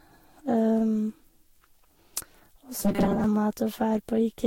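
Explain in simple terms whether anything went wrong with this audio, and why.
Two problems can be heard in this speech recording.

Throughout, there is generation loss. The speech sounds swirly, hollow and smeared, and nothing is left above about 16.7 kHz. It was likely compressed and decompressed around seven times, and each pass added its own damage on top of the last.

From 2.78 to 3.24 s, the speech turns into a stiff metallic buzz at 200 Hz. This is robotic sound from repeated short buffers. The buzz rate fits a tiny 5 ms slice of sound being replayed over and over, likely because fresh audio arrived too late. Most of the real sound in that stretch was skipped.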